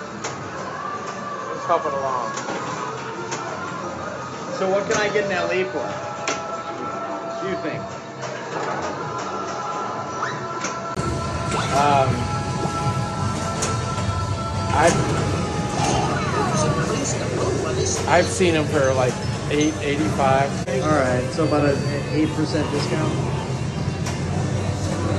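The input was likely switched to a poorer device, with the recording running through that lesser microphone from the start until about 10.97 s, when it switches back to the fuller input after a brief 20 ms gap. Over that first stretch nothing reaches above 7.6 kHz, so the sound is dull and boxy, somewhat quieter, and carries a faint background noise of its own. After the gap the top end and level return.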